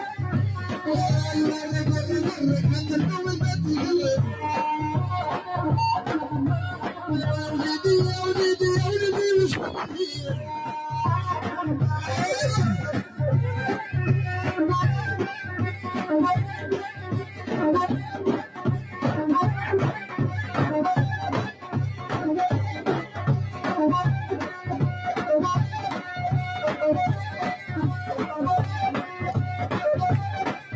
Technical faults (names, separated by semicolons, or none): noise suppressor applied to music or sounds; sound cut by the noise suppressor